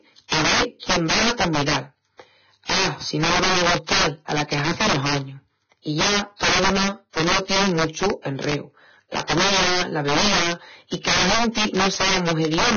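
Integer overflow runs through the whole speech clip. The signal was driven about 8 dB past the largest integer value, and around seven percent of samples wrapped to the opposite sign instead of being limited. Each flip across the full range gives a crack on loud passages, much sharper than ordinary clipping.

Heavy codec damage is also present throughout. Nothing remains above 6.5 kHz, and the treble is reduced to grainy, hiss-like noise with roughened tones and blurred attacks. This is likely Vorbis compression at a low setting, which fits a bitrate near 19 kbps.

Pre-echo appears from 2.64 to 2.70 s. The transform codec spread quantisation noise evenly across its block, so the noise meant for a sharp attack also fills the quiet 52 ms before it. The result is a short hiss ahead of the onset, which sounds smeared.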